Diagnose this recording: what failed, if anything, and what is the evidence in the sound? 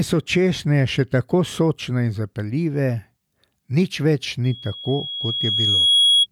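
The playback loudspeaker fed back into the microphone, closing an acoustic loop whose gain exceeded one at 3.3 kHz. The result is loudspeaker feedback squeal: from 4.44 s a pure tone swells over about a second and a half, ending near 5 dB above the speech, until 6.27 s.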